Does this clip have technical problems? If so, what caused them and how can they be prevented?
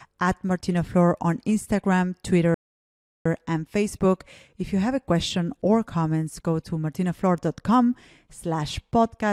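Yes. A rebuffering stall silences the speech from 2.54 s to 3.26 s. The player ran out of downloaded audio. It waited, then resumed at the exact point it stopped. No sound is missing, but the clip runs 0.71 s longer. A larger playback buffer prevents it.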